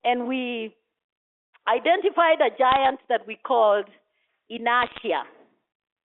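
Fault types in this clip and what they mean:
Bit errors on a digital phone line: flipped bits corrupt single samples, causing two brief crackle bursts seen as isolated waveform spikes and thin vertical spectrogram streaks.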